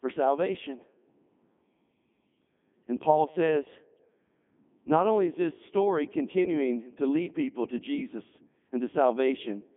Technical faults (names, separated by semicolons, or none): Codec 2 vocoder